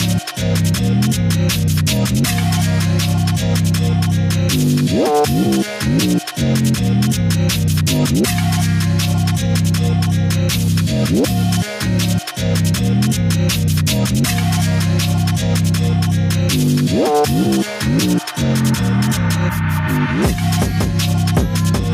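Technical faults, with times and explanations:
Nothing stood out on listening.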